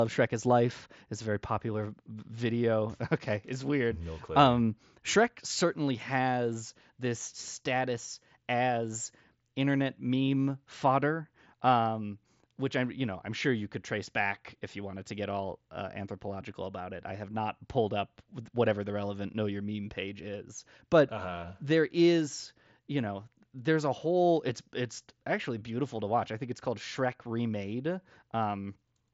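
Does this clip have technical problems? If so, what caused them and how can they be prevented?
No, no technical faults here.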